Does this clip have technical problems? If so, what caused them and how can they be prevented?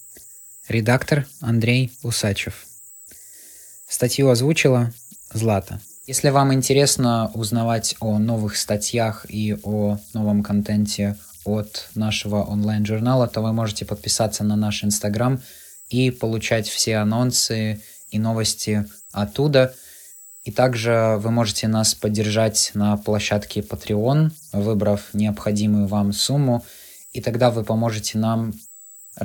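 Yes, there's converter idle tones running through the whole clip: a faint, thin whistle somewhere around 7 kHz that pokes out in the pauses between phrases and turns into a grainy fizz under the speech, sitting about 27 dB below it. That's a delta-sigma converter working without dither. With low-level input it locks into repeating bit patterns, and those cycles come out as pitched tones. Keeping dither enabled in the converter stops this from happening.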